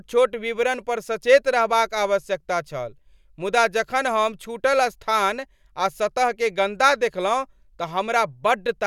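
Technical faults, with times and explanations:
No technical faults detected in the speech recording.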